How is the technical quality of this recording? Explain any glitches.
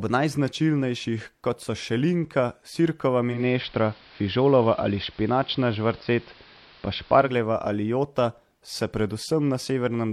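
The recording has one glitch, a stretch of digital radio blending to analogue. From 3.28 s to 7.37 s the speech turns dull and slightly hissy. A faint hiss sits roughly 30 dB below the signal, and the level shifts by about 2 dB. The receiver lost its digital stream and cross-faded over about 0.18 s to the station's AM broadcast, whose narrow bandwidth trims the treble, before fading back to digital.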